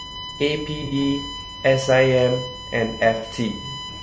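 It's a speech recording with three problems stacked on it. Under everything sits a steady USB whine, a fixed-pitch tone built on 1 kHz with its strongest component at the third harmonic, 3 kHz, only about 15 dB below the speech. That's the USB bus pulling current in 1 ms frames and the ripple getting into the audio through shared power or ground, so you hear the frame rate and its multiples as a constant tone. The speech itself sounds rough and grainy, with a noisy fill between the harmonics and a top end that feels thin and a bit synthetic. That's most likely low-delay AAC compression, the AAC-ELD kind used for video calls. Its frames are so short that it can't separate the pitch harmonics cleanly, and the damage level fits a low bitrate of around 32 kbps. On top of that there are two dropouts, from 0.86 to 0.95 s and from 3.17 to 3.26 s. Each one is AAC frame loss with concealment, covering about 60 ms, which fits two lost frames. 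Because each gap is short, the decoder bridges it by reusing the last good spectrum, rather than fading down toward silence. So each gap comes across as a brief smeared, noisy or phasey blur in the speech instead of a clean cut.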